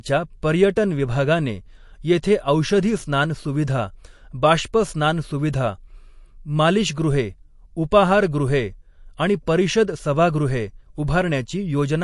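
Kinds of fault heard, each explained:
MP3 compression: nothing above 11.3 kHz, with plainly audible watery swirling in the speech, likely from MP3 at a low bitrate such as 48 kbps.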